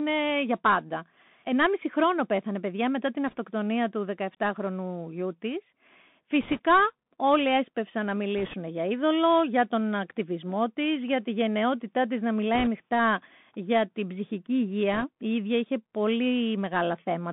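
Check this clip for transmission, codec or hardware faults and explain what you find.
Two faults are present: the whole clip passed through a narrowband Bluetooth headset codec, and the link suffered brief bursts of bit errors.

Bluetooth CVSD headset codec, throughout: the speech was squeezed into a one-bit, adaptive-step delta coder, which fits a 64 kbps CVSD link. The band is held to roughly 150 Hz to 3.6 kHz. The damage is plainly audible: s sounds are scratchy, loud bright syllables distort, and a granular hiss runs under the speech.

Bit errors on a Bluetooth voice link, at 3.27–3.36 s (after "πέθανε παιδιά μετά την"), 6.41–6.59 s, 8.38–8.55 s (between "όλοι έσπευσαν να" and "για είδωλο για τον"), 12.54–12.68 s (after "τη γενναιότητά της να") and 14.93–15.05 s: flipped bits in the CVSD stream, at error rates of a few percent, each nudge the step the wrong way and then fade. The result is a short rushing crackle rather than sharp clicks. 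The bursts near 6.4 s and 12.5 s are the harshest.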